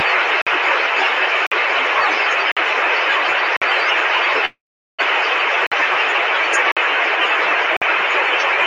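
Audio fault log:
0.42, 1.47, 2.52, 3.57, 5.67, 6.72 and 7.77 s: gap between chunks. The audio was delivered in 1.0 s chunks, and each join carries a 50 ms stretch of silence, from padding or from playback of each chunk starting slightly late. Nothing is dropped, but the flow stops dead at each join. Each gap sounds like a short hole, and the holes arrive at a steady rhythm just over a second apart, apart from a longer wait between 3.57 and 5.67 s.
4.45 to 5.01 s: call audio freeze. The incoming stream most likely stalled and the jitter buffer ran dry. Instead of cutting out, playback held onto the last sound for about 0.48 s, stretching it into a fading buzz or hiss, with roughly 370 ms of that stretch sinking to silence. When data resumed, the audio continued from where it stopped, with nothing missing. Everything after this point plays about 0.48 s later than it should.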